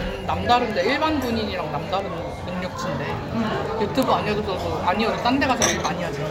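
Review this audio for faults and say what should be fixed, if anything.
Word clock ticks run through the whole clip, from 0.15 s to 6.24 s: about thirty sharp ticks of uneven strength, arriving at a steady rate of roughly one every 0.2 s. The receiving device is reading a digital link on its own free-running clock. A clock mismatch of about 100 ppm makes the two clocks slip past each other at that rate, and each slip drops or repeats a single sample, producing the tick.

To prevent it, lock the receiver to the sender's clock or a shared house clock, or use sample-rate conversion at the input.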